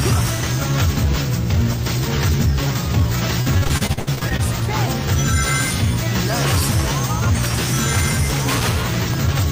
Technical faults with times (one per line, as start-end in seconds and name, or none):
3.41-4.40 repeated packet loss (robotic sound)